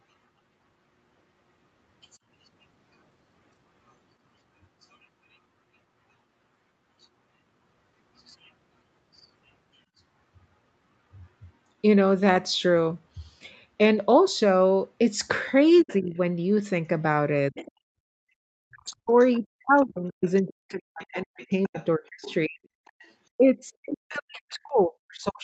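At 15.77 s a faint second voice slips in for under a fifth of a second, about 25 dB below the talker, and from 15.82 to 16.17 s the talker's own voice dips by roughly 15 dB, losing around a fifth of a second in total. The first is the other side's voice leaking through: the far-end loudspeaker sound reaches the microphone and the echo canceller likely failed to remove it fully. The dip is speech suppressed in double talk, likely with both sides active and the canceller turning everything down. Another brief leak follows at 17.55 to 17.72 s, somewhat stronger at about 20 dB below the speech.

From 18.49 to 22.67 s the talker's voice is heavily suppressed, falling as much as about 40 dB, with roughly three seconds affected in total. Meanwhile the far side's voice leaks through from 19.33 to 23.11 s at about 25 dB down. The same suppression returns from 23.37 s to the end, again reaching about 40 dB, with one more leak from 24.09 to 24.54 s. 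Throughout, the sound is band-limited at 8 kHz, consistent with Opus at 32 kbps on a call path.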